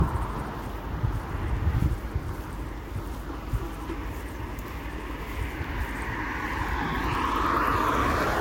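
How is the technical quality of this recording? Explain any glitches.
The technical quality is poor, with two faults running through the whole recording.

Mains hum sits under the sound from start to finish as a steady 50 Hz tone with low harmonics, only about 10 dB below the wanted sound. Power-line current is leaking into the signal path, probably through a ground loop or a nearby transformer.

Generation loss is also present for the full length. The audio sounds swirly, smeared and hollow, attacks are blurred, and nothing remains above 16.7 kHz. The likely cause is about four rounds of lossy decoding and re-encoding, consistent with Vorbis at around 65 kbit/s. Each pass re-quantises the audio on a shifted frame grid, so noise and spectral holes accumulate.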